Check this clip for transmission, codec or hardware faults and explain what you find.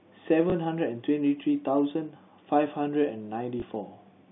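Two brief transmission faults occur in the speech, heard through a narrow telephone band from G.711 coding. At 0.50–0.52 s and 3.60–3.62 s, packet loss with the last packet repeated fills a lost 20 ms packet with a copy of the previous one. Each repeat sounds like a small blip. Unlike a silent dropout, the gap is never empty.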